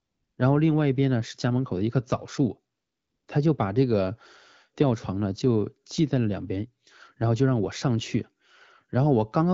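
AMR comfort noise fills the opening, from 0 to 0.37 s, and returns from 2.75 to 3.27 s, about half a second. The phone judged the talker silent and stopped sending speech frames. The receiver substituted smooth synthetic noise, which switches in and out against the real background.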